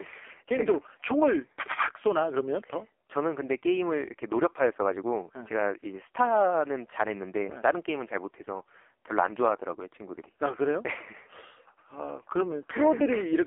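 Throughout the speech, an AMR narrowband mobile codec confines everything to a 300 Hz to 3.4 kHz phone band. The heavy damage fits a very low rate near 5.15 kbps, making it buzzy and synthetic. A spectrogram shows a hard ceiling at 3.4 kHz and smeared harmonics.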